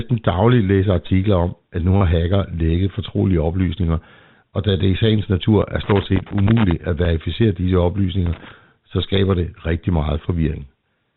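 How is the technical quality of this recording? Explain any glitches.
Technically it's a rough one: a handful of dropouts and a couple of bursts of crackle, all sitting on speech in the narrow telephone band, with nothing above 4 kHz, as you'd expect from G.711 coding.

The repeated buffer glitches turn up five times: at 0.33 s, 1.97 to 2.01 s right after "om at nu", 5.61 s right after "da det i sagens", 7.05 s and 9.16 s. Each time, fresh audio didn't reach the output in time, so the device replayed the piece it already had. That piece is about 10 ms long, which fits a 10 ms buffer. Most of these are a single replay and come across as a tiny click. The one at 1.97 s loops four extra times over 40 ms, so you get a brief buzzy stutter there.

There's a packet loss with pitch repetition at 1.07 s, lasting about 22 ms, just before "om at nu". The receiver lost roughly 20 ms of audio, which points to two missing packets, and it covered the hole by repeating the last pitch cycle of the speech. 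Because the gap is short, it never fades out to silence. What you hear is a slightly held, buzzy moment before the speech picks up again.

Loose connector crackle shows up twice: from 5.84 to 6.72 s, nearly a second of it, and again from 8.26 to 8.52 s. A worn or dirty contact keeps making and breaking as something moves, chopping the signal on and off very fast. It comes across as irregular scratchy crackling over the speech, quite distinct from the clean, regular clicks of the buffer repeats.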